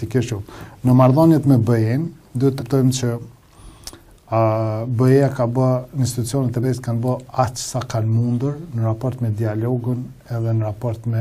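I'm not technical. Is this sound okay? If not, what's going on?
No. Compressed frames were skipped: chunks of audio went missing, so the sound jumps ahead, about a fifth of a second at 2.58 s and a brief moment at 6.62 s.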